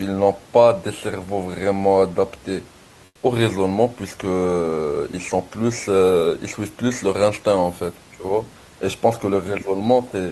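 From 3.05 to 3.23 s the room background turns flat, featureless and about 6 dB quieter. That's comfort noise in place of the background, likely from DTX pausing transmission.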